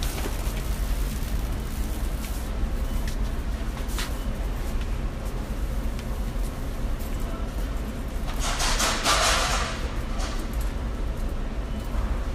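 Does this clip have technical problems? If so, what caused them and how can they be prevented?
No, there's nothing technically wrong to hear in this one, so there's no cause to track down and nothing you need to do differently.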